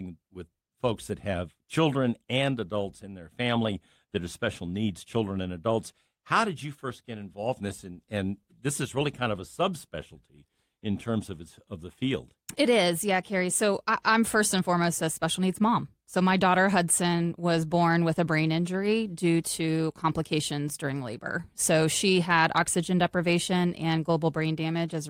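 No technical faults are audible anywhere in the speech recording.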